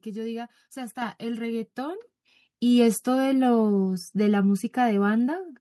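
At 1.02 s the level of the speech and its background jumps by about 6 dB all at once, and at 2.04 s it jumps again by about 5 dB. This is the microphone volume stepped up: the call software judged the input too quiet and raised the device's input gain in single steps, so voice and room noise rise together. On a waveform the envelope widens abruptly at each time; a spectrogram brightens evenly across all frequencies.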